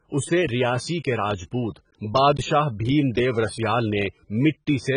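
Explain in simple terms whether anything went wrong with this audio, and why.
AAC compression damage runs through the whole clip, from start to finish. The speech sounds dull and smeared, with nothing above about 9.8 kHz, and a fizzy, warbling texture on hissing sounds. This is likely from squeezing the audio hard with AAC: the codec chops sound into short chunks, throws away detail it judges least noticeable, and cuts off the highest frequencies to save space, leaving gaps that turn swirly.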